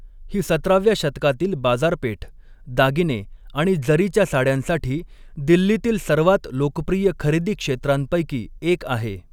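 Nothing in this bit of speech trips the ear as a technical fault, so there's nothing here to flag.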